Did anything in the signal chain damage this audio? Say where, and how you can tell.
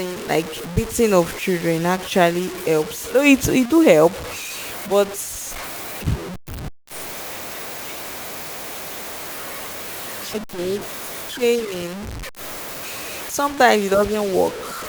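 Yes: the speech throughout carries low bit depth without dither, likely from a sample-format conversion truncating to about 5 bits. Error sits roughly 15 dB below the signal, making gritty distortion that tracks the speech. The waveform shows coarse staircase steps, and the spectrogram shows signal-following broadband hash.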